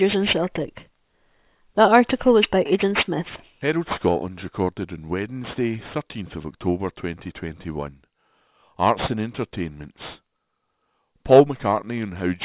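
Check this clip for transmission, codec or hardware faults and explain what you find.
Aliasing runs through the whole speech clip. The sample rate was cut without an anti-aliasing filter, which fits a drop from 48 kHz to 8 kHz, so energy above 4 kHz folds back below it. Sibilants turn gritty and metallic, with spurious tones sitting not far beneath the speech, right up to the band edge.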